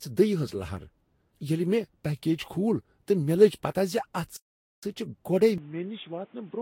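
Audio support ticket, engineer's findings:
Generation loss, whole clip: swirly, hollow speech with smeared consonant onsets. Spectrogram shows hard ceiling at 16.6 kHz plus patchy holes and smeared transients. Likely repeated Vorbis re-encoding, around five passes, consistent with roughly 55 kbit/s; quantisation damage compounds.

Playback stall, 4.37–4.83 s: speech cuts out mid-flow for about 461 ms, then resumes. Waveform shows a flat silent gap; spectrogram shows a blank vertical band. Likely player buffer underrun or blocked audio thread halting output.

Input switched to a poorer device, 5.58 s to end: abrupt dull, boxy tone, no gap at the switch. Spectrogram shows a narrower band, new noise floor about 30 dB under speech; waveform drops about 5 dB. Likely changeover to narrowband headset or microphone.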